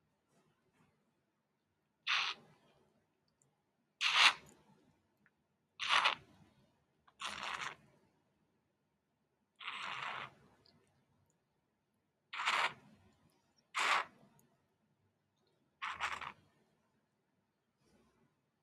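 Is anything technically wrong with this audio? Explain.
Yes. A noise suppressor applied to music or sounds stays active throughout, and its gain swings by roughly 15 dB. A suppressor tuned for speech treats sustained tones, ambience and reverberant tails as noise and pulls them down, while sharp onsets pass. The level pumps and thins as sounds hold or decay. Unlike a compressor, the dips follow how steady a sound is rather than how loud it is.

The sound is cut by the noise suppressor in three stretches: 0.01 to 4.0 s, dropping by about 9 dB at its deepest over roughly three seconds in total; 4.91 to 9.59 s, by about 10 dB over roughly three seconds; and 10.84 s to the end, by about 10 dB over roughly five seconds. Held and fading parts sink and tails are clipped short, while transients survive. A noise gate would instead shut quiet passages off completely.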